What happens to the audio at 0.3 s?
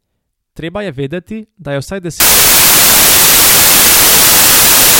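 Nothing goes wrong at 0.3 s; the speech carries on intact through that moment.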